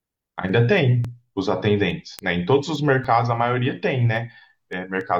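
At 1.05 to 1.08 s and again at 3.05 to 3.08 s, overlap between stream segments removes 37 ms of speech at 2 s boundaries, leaving an abrupt waveform jump heard as a tiny skip.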